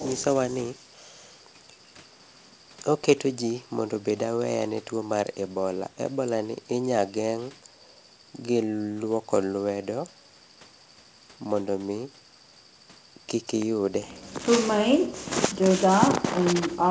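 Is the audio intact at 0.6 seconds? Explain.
Yes, the speech at 0.6 seconds is intact, with nothing beyond the ordinary effects of the call chain: the bandwidth stops at about 8 kHz, as expected from the call microphone processing and a G.722 call path at 64 kbps.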